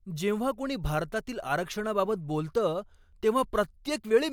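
No technical faults are audible.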